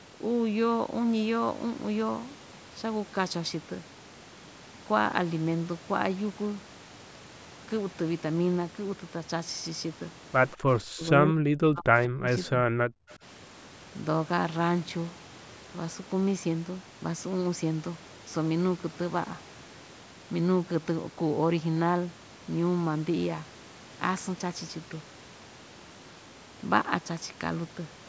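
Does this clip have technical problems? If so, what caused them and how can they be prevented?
Yes. An echo leak occurs at 10.52 to 10.57 s: the far end's echo canceller likely let some of its loudspeaker pickup through, so a brief, faint copy of the speech returns about 187 ms late, roughly 30 dB below the direct sound. Using a headset or a better-tuned echo canceller at that end would keep the loudspeaker output out of the microphone path.

Speech suppressed in double talk occurs at 10.56 to 10.66 s and again from 10.82 to 13.23 s, likely because the echo canceller could not tell the local talker from loudspeaker echo while both sides spoke. It pulled the speech down by about 30 dB in the first short dip and by about 40 dB over roughly 2 s in the second. Headsets on both sides, or an echo canceller with stronger double-talk detection, would prevent the suppressor from clamping down on real speech.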